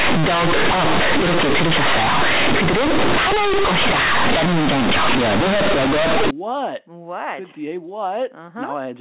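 From the start through about 6.31 s you get companded audio read as linear. The speech was coded as mu-law, but those bytes are being played back as plain linear 8-bit samples with no expansion step. Because of that, every sign change throws the output across roughly half its range, quiet bits come out as big as loud ones, and the waveform gets mangled. It sounds like very loud, buzzy distortion with strong noise in the pauses. After that the G.711 mu-law telephone coding decodes properly, so you hear the usual 8 kHz phone sound with nothing above 4 kHz.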